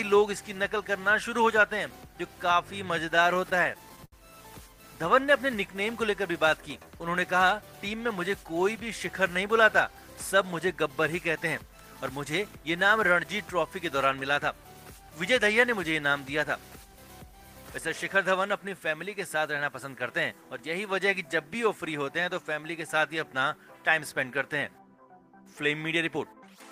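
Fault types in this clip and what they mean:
Repeated stalls (stutter): Audio arrived late, so the receiver's jitter buffer ran dry again and again. From 3.09 to 4.14 s the sound halts 13 times. Each halt is bridged by stretching out the last sound, the longest for 69 ms. About 181 ms is filled this way, roughly a sixth of that stretch. Nothing goes missing. The audio drags and stutters instead.
Jitter buffer speed-up: Too much audio had piled up in the buffer, so the receiver trimmed tiny slices of a pitch period or so, many times in a row. The pitch stays the same but the pace rises. From 19.35 to 20.32 s the sound runs 6% fast. From 26.05 to 26.64 s it runs 10% fast. Each pass drops roughly 70 ms in total, so both passages sound hurried.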